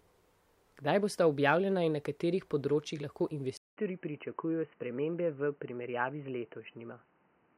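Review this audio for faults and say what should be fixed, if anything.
At 3.57 s, after "na katerih področjih lahko", a 200 ms gap leads into dull, boxy speech to the end, likely an input switched to a poorer device. The spectrogram shows nothing above 3 kHz and a new faint noise floor, with the waveform level unchanged.

Lock recording to a single microphone and disable automatic device or headset call-profile switching during capture.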